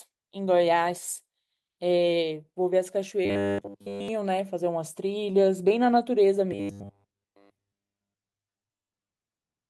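From 3.25 to 4.08 s the speech collapses into robotic sound from repeated short buffers: a stiff, metallic 100 Hz buzz that loosely tracks the words. That pitch fits a 10 ms chunk being looped. The likely cause is audio arriving too slowly, so almost everything there is repeats rather than fresh audio.

Around 5.31 to 5.35 s there's a short concealed packet loss. About 20 ms went missing and roughly 16 ms was patched by stretching the preceding sound, so you get a quick smear or wobble before it blends back in.

The robotic buzz returns from 6.52 to 9.10 s, the same 100 Hz metallic drone with the speech underneath it nearly entirely replaced by repeats.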